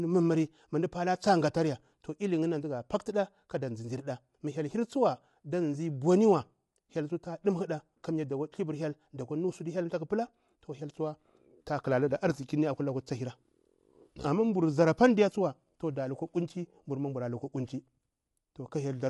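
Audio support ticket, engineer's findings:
Speech rough and grainy throughout, noise filling gaps between harmonics, nothing above 11.6 kHz. Likely low-delay AAC compression (AAC-ELD): short frames resolve pitch harmonics poorly. Damage plainly audible, consistent with a bitrate around 32 kbps.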